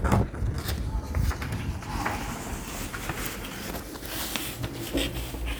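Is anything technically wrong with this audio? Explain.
No, nothing technically wrong can be heard in this audio.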